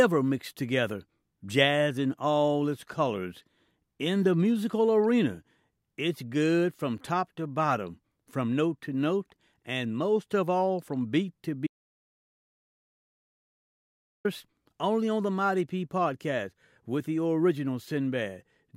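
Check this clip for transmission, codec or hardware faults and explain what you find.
There is one fault, an audio dropout to silence from 11.67 s to 14.25 s. The input feeding the recorder was likely lost for that stretch, through a dropped connection, a failed link or an accidental mute, while the recording carried on writing silence. The speech cuts off abruptly, leaving about 2.58 s of silence with no room tone at all, then resumes just as suddenly. Whatever was spoken in that gap is gone.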